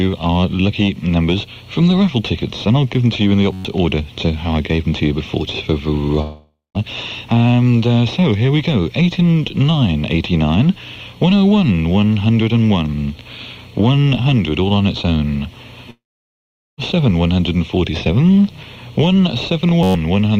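At 3.53 s the playback system hung while the sound hardware kept cycling its ring buffer. The result is a system hang loop: a 10.67 ms fragment repeats exactly 11 times until 3.65 s, which fits a 512-sample buffer. At that length the repeats fuse into a steady buzz at about 94 Hz, and about a tenth of a second of real audio is lost underneath it.

From 6.21 s to 6.77 s there is a long network dropout. The likely cause is that packets stopped arriving, so the receiver had to fill the gap itself. It stretches the last sound into a fading buzz for most of the roughly 0.54 s hole, and the final 0.18 s goes silent. The sound then resumes further on, with that stretch missing.

A second long network dropout runs from 15.91 s to 16.80 s and takes out about 0.88 s. Here the concealed tail fades quickly, leaving about 0.79 s of silence before the audio returns past the gap.

At 19.83 s another system hang loop repeats the same kind of 10.67 ms buffer 11 times, ending at 19.95 s. 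It gives the same buzz of about 94 Hz, and about a tenth of a second of audio is again lost.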